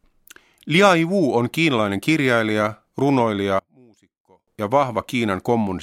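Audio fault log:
3.59–4.48 s, one channel inverted: the speech drops by about 31 dB for just under 0.9 s and returns to normal level afterwards. What remains is a faint residue. The likely cause is reversed polarity on one stereo channel, so the content common to left and right cancels when the two are summed to mono, leaving only their small differences.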